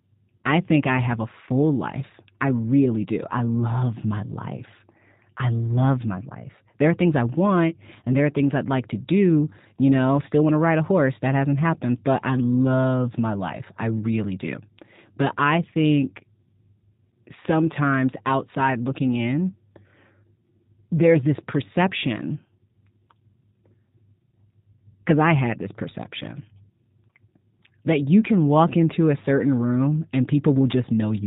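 Speech that has passed through the G.729 codec for its whole length, the narrowband coding of roughly 8 kbit/s VoIP. Synthesizing each frame from a filter, pitch predictor and sparse pulses leaves everything above 4 kHz gone, so the voice sounds muffled, audibly buzzy and somewhat artificial.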